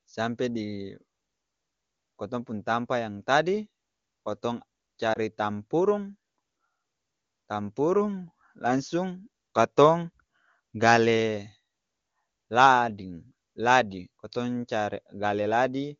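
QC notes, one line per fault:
5.13–5.18 s, lost AMR speech frame: after "tampa yang tadi kotong", one 20 ms frame is rebuilt from the previous one at lower gain. This causes a brief dip, a short waveform sag and a smeared spectrogram patch.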